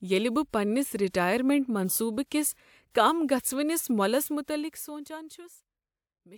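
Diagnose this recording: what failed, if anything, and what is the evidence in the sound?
Nothing in this speech recording stood out as a failure on listening, so there is no stage to point to and no evidence of a fault to report.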